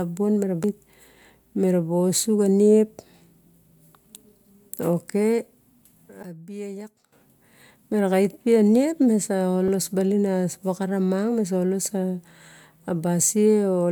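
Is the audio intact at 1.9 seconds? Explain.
Yes, at 1.9 seconds the speech plays through cleanly, with no dropout, click, distortion or other fault.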